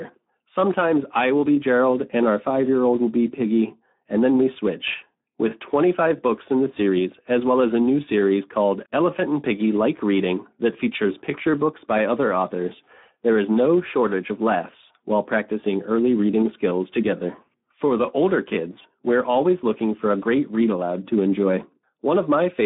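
Speex codec damage throughout: too few excitation bits, consistent with about 11 kbps, leave the speech hoarse and noisy, confined to 200 Hz to 3.6 kHz.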